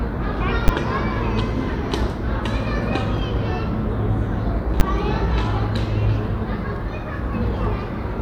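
At 0.68 s and again at 4.8 s there's a sharp bang, each one a burst of invalid numbers at full scale. A calculation blew up to infinite or invalid values that clipped to the maximum, and because each block lasts only 10 ms, it lands as a single loud crack.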